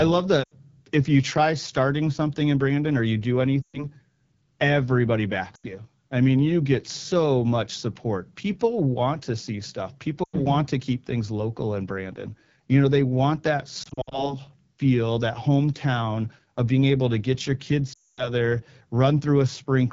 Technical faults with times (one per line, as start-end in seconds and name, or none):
0.00-19.93 AMR wideband (HD Voice) codec
0.43-0.53 lost AMR speech frames
3.62-3.86 lost AMR speech frames
5.55-5.66 lost AMR speech frames
10.24-10.36 lost AMR speech frames
13.83-14.36 lost AMR speech frames
17.93-18.30 lost AMR speech frames